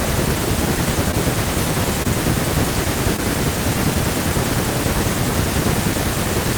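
Short concealed packet loss occurs at 1.11–1.15 s, 2.03–2.06 s and 3.16–3.20 s. Each time about 20 ms of the speech arrived too late to decode, and the receiver extended the preceding sound to cover the gap before blending back, leaving a brief smear or wobble.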